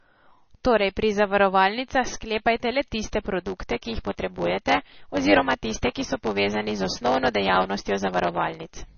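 From the start, the speech sounds dull and watery, with nothing above about 6.6 kHz, a swirling, unsteady texture, and smeared consonant onsets. This is most likely heavy MP3 compression at a very low bitrate, around 29 kbps. Starved of bits, the encoder cuts off the top band entirely and drops quieter frequency lines, which flicker in and out from frame to frame and leave that swirly residue across the whole clip.

From 3.39 s, just after "zavarovalnicah sklepajte le tiste", and on to the end, a steady 100 Hz buzz appears and the speech runs about 1.07 times faster while staying close to its normal pitch. This is a block size mismatch (truncated). One stage produces longer blocks than the next stage accepts, which fits 512-sample blocks being written, so the tail of every block is discarded. The regular cut at each block boundary makes the buzz, and the missing audio makes the speech run faster.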